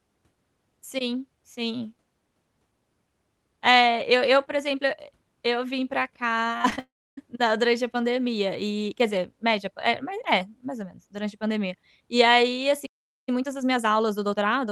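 Just after "e eu vim pra", from 6.47 to 6.79 s, repeated packet loss gives a choppy, robotic texture. Five short holes, the longest 25 ms, are patched by stretching the preceding sound, so about a third of the stretch is synthetic. On a spectrogram this appears as smeared, repeated harmonic slices with abrupt seams. In the waveform, the envelope stutters.

From 6.79 to 7.19 s the sound likely suffers a long network dropout. The last sound is continued as a buzz that fades, then roughly 0.3 s of near silence follows. Speech resumes at "na durante a pandemia" with the intervening audio gone. The spectrogram shows a fading smear into an empty band, and the waveform flattens out.

At 12.85 s a playback stall, likely from the player starving for data, cuts the audio off mid-flow for about 0.42 s until 13.29 s. The waveform shows a hard drop to a flat line, and the spectrogram shows a clean vertical gap across all frequencies below the call path's roughly 12 kHz ceiling.

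After "pandemia e aí assim", from 13.29 s to the end, time-compressed catch-up plays the backlog at about 1.25× speed. Pitch is unchanged, but the sound is hurried. Syllables and pauses look shortened in the waveform, and the spectrogram shows tiny cross-fade seams while harmonic spacing stays the same.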